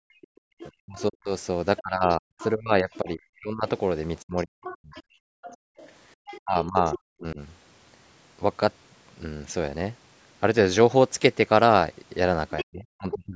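From 0.0 to 4.96 s, speech suppressed in double talk is likely at work: with both ends talking, the echo canceller turns the talker down, by as much as roughly 40 dB, for about three seconds in total, so the voice dips and breaks up. Over that stretch, from 0.22 to 3.1 s, likely incomplete cancellation lets the other side's voice leak through, roughly 20 dB below the talker. Between 0.31 and 0.41 s the canceller also clamps the microphone, and the background drops by about 39 dB for a brief moment before returning.

From 4.39 to 6.99 s the other side's voice leaks through again, louder this time at roughly 15 dB below the talker. Inside that stretch, from 5.24 to 5.77 s, the background gated by the echo canceller falls by about 40 dB for under half a second. From 6.39 to 7.4 s the talker is suppressed in double talk, dropping roughly 35 dB across about half a second.

Near the end, from 12.58 to 13.14 s, the other side's voice leaking through rises to roughly 10 dB below the talker. 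From 12.64 s to the end, speech suppressed in double talk cuts the talker by up to roughly 40 dB for about half a second.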